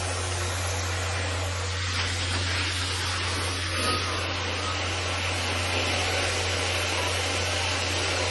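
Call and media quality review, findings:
MP3 compression, full clip: watery, swirly texture, smeared attacks, nothing above 11.4 kHz. Likely a low-bitrate MP3 encode, consistent with about 32 kbps. Spectrogram shows a hard ceiling at 11.4 kHz and weak bins flickering on and off between frames.

Train of clicks, 5.14 to 8.18 s: regular ticking at 7.9 per second, around thirty clicks, peaks about 10 dB above the sound. Likely interference or a faulty connection or power supply. Waveform shows evenly spaced similar spikes; spectrogram shows thin vertical broadband lines.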